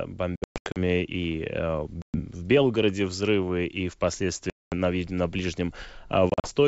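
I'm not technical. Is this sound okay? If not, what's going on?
No. This is packet loss on an ADPCM call: chunks of sound vanish into sudden silence at 0.36–0.77 s, 2.02–2.22 s, 4.50–4.74 s and 6.30–6.50 s. Unlike a simple mute, the sound comes back slightly distorted, because the receiving end briefly loses its place, before settling.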